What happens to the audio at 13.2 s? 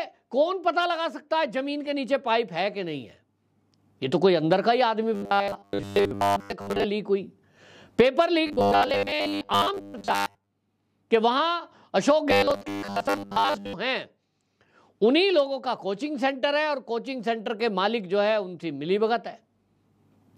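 At 13.2 s the sound is in the middle of robotic sound from repeated short buffers, running from 12.30 to 13.73 s: a rigid metallic buzz at 100 Hz, likely from a 10 ms chunk being replayed over most of the real audio. Unlike stutter or dropouts, the buzz holds a fixed rate.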